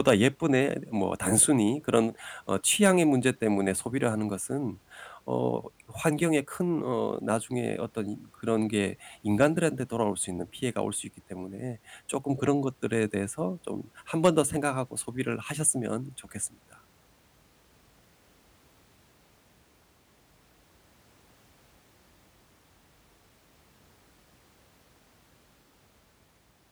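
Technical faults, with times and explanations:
0.07–0.27 s, 2.85–2.90 s and 14.25–14.40 s, hard clipping: peaks overshoot by about 2 to 4 dB and get sliced flat, so those loud bits of speech crackle with harsh upper harmonics.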